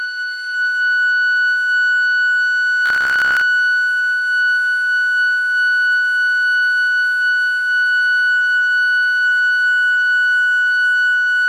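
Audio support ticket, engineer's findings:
Robotic sound from repeated short buffers, 2.86–3.41 s, in the music. A rigid, metallic buzz at 66.7 Hz. Likely cause: the input stream is starved, so playback loops the last chunk of about 15 ms and skips roughly half the real audio. The 66.7 Hz pitch fits a 15 ms repeat period. Spectrogram shows evenly spaced harmonic lines at multiples of 66.7 Hz across the span. Waveform shows identical short segments tiled back to back.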